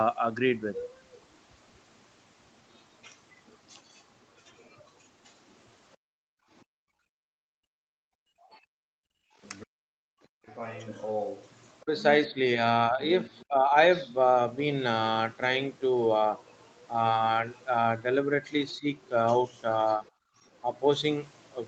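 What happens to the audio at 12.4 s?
The speech dips by around 15 dB in brief patches from 11.82 to 13.72 s, likely speech suppressed in double talk by an echo canceller mistaking it for echo.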